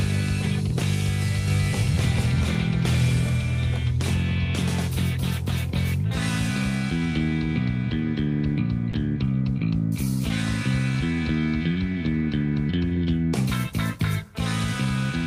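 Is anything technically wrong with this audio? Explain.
Yes, two faults can be heard.

From 1.48 to 3.26 s there is a doubled audio track. A second full-band copy of the sound runs roughly 0.4 s behind the first and at about the same level. It has no decay or room colouring and starts and stops abruptly. The likely cause is a second, slower capture path or an edit that left two copies out of step. The result is a distinct, hard-edged repeat rather than a reverberant tail.

From 8.91 to 8.93 s, a 20 ms stretch of sound is dropped by the voice detector. The sender's discontinuous-transmission logic, which fits Opus DTX, most likely judged that moment to be background and briefly stopped sending. The receiver filled the gap with generated noise in place of the real signal. What you hear is a very short hole where the sound gives way to filler and then resumes once transmission restarts.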